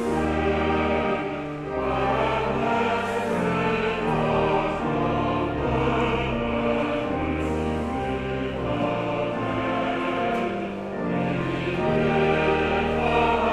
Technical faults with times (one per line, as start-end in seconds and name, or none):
none